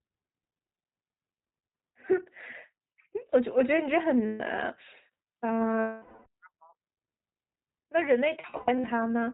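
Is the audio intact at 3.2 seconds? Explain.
No. At 3.2 s, as throughout, the speech carries iLBC codec damage: each 20 ms frame coded independently, nothing above 4 kHz, a rough synthetic edge rather than G.711's plain telephone dullness.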